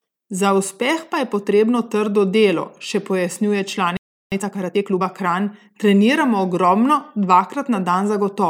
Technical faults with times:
3.97-4.32 playback stall
4.32-5.02 time-compressed catch-up

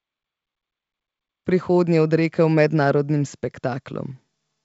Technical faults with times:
none

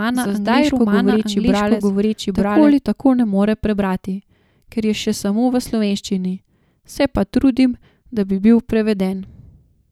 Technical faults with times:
0.00-2.72 doubled audio track

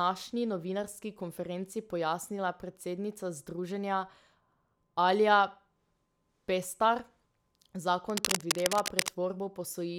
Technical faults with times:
8.10-9.09 cable scratch noise

